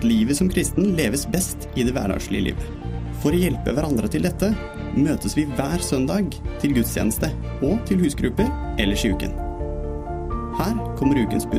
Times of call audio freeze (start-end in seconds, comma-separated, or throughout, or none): none